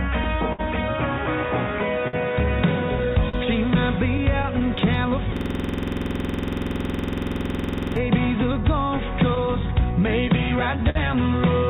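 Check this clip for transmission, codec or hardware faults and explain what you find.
Three faults turn up here, one running through the whole clip and two tied to particular stretches, all heard over a narrowband call path whose band stops at about 4 kHz, the way G.711 A-law at 64 kbps does.

Clock drift between sender and receiver runs the whole way through. The sender's clock is running roughly 4% slow, so the receiver's jitter buffer keeps draining and has to stretch or repeat little bits to keep up. You get small timing hiccups recurring at uneven intervals.

Scattered short gaps appear from 0.24 s to 10.98 s, roughly fifteen of them, none longer than about 50 ms, adding up to around 300 ms of patched audio. Each lost or late packet got covered by extending the previous sound, so you hear quick ticks and little smears.

The system hang loop runs from 5.37 s to 7.96 s. The machine froze while the sound card kept replaying its ring buffer, one 46.44 ms slice repeated 56 times, which fits a 2048-sample buffer. 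At 21.5 Hz that comes across as a rough buzzy stutter.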